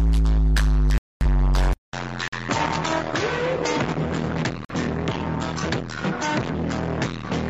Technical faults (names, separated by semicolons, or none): corrupt frame muted; input switched to a poorer device